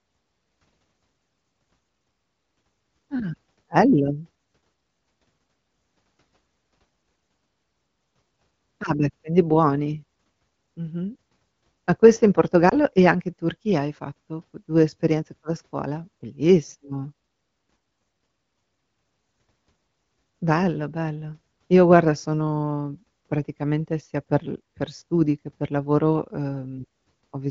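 Between 12.69 and 12.75 s, right after "questo in" and before "e anche in", there are lost AMR speech frames. A radio error corrupted the data, so the checksum failed. The decoder then guessed the missing piece. It reused the last good pitch and vocal tract settings at lower gain. The gap sounds like a single 20 ms frame. It comes through as a brief dip or warble in the otherwise clear wideband speech. The voice then returns weak or rough for a moment.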